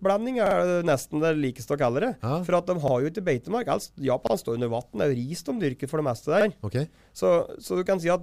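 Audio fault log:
0.46 to 0.56 s, 2.88 to 2.93 s, 4.27 to 4.32 s and 6.41 to 6.46 s: repeated buffer. Fresh audio failed to reach the output in time, so the device replayed its last block, about 46 ms long, which fits a 2048-sample buffer. The first event plays that block twice more and the others once. The same fragment therefore sounds back to back with a hard seam at each join, giving a brief stutter. Nothing appears to be lost.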